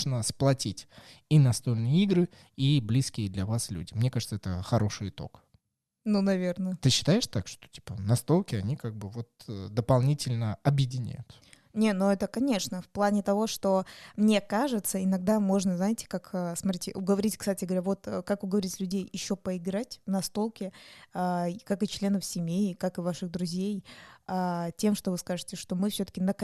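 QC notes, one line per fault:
No faults heard anywhere in the speech.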